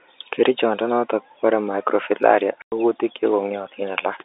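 A run of packets went missing on the network and the receiver filled the gap with silence, a packet loss filled with silence, in this speech clip carried over G.711 telephone coding. Just after "kobore microfilaria", at 2.62 s, the audio drops out completely until 2.72 s, a 100 ms hole that fits five lost 20 ms packets. The sound stops and restarts abruptly at hard edges, all within the narrow telephone band that tops out near 3.7 kHz.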